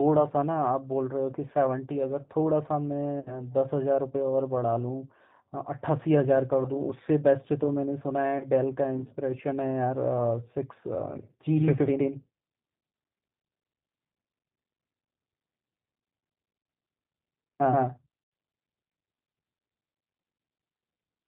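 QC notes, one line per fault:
Throughout, G.729 codec: the speech runs through an 8 kbit/s G.729A codec that rebuilds each 10 ms frame from a filter, a pitch predictor and a few pulses, so nothing above 4 kHz survives and the speech sounds plainly rough, thin and slightly synthetic.
3.20–3.33 s, 8.38–8.46 s and 18.23–18.32 s, VoIP packet loss concealed by the speech codec: about 60 ms, 30 ms and 90 ms of audio went missing, and the decoder extrapolated from its last pitch and filter, producing a buzzy, fading smear that stays weak briefly after audio resumes.
11.56 s to the end, doubled audio track: a second full-band copy of the speech, about as loud as the first, abruptly joins around 150 ms behind with no room colour. This is likely a second capture path or an edit leaving two copies out of step.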